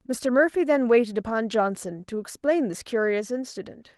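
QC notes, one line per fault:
Nothing to flag here; the speech comes through its light voice compression without any fault worth noting.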